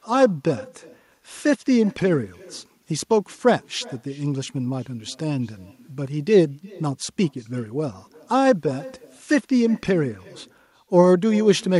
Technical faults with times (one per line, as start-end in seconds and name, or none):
0.00-11.79 echo with no canceller